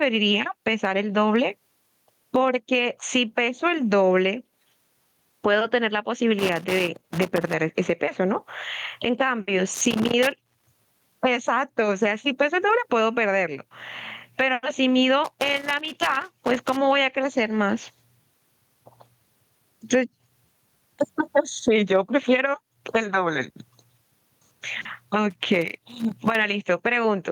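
Gain pumping runs through the whole speech clip. The level swing is large, about 20 dB. Likely cause: input gain set far too high, with a fast limiter clamping every peak. Loud and soft passages sit squashed together.

Loose connector crackle breaks in four times: 6.39 to 7.54 s, 9.74 to 11.14 s, 15.24 to 16.77 s, and 25.30 to 26.36 s. Each burst is irregular crackle and scratching. A worn or dirty contact is making and breaking as it moves, chopping the signal.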